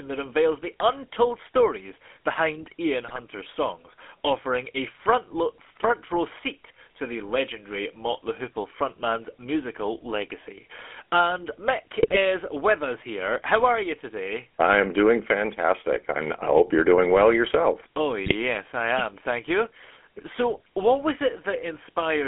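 Throughout, the speech carries the GSM full-rate codec's buzzy, gravelly grain, with the band held to about 250 Hz to 3.4 kHz. The roughness, consistent with a 13 kbps pulse-excited coder, distinguishes it from plain telephone band-limiting, which dulls but doesn't buzz.

GSM bit errors hit from 3.08 to 3.19 s, just before "songs offering a front", from 12.02 to 12.17 s, before "with us here", and from 18.25 to 18.33 s, before "I am". Corrupted decoder values produce brief squawks and gargling bursts, unlike the silent gaps of dropped packets.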